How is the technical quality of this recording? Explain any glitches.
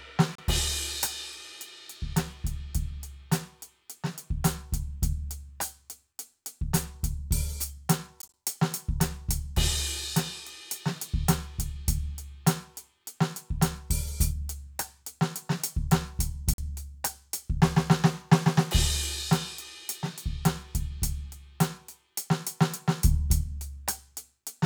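The music is marred by three brief gaps, most likely a Bluetooth dropout. At 0.35 to 0.41 s about 30 ms goes silent. From 8.22 to 8.34 s about 46 ms is lost in short scattered holes, the longest about 15 ms. At 16.54 to 16.61 s about 46 ms drops out. Packets that arrived too late were discarded, so the output cut out and resumed further along, as though the music had kept playing.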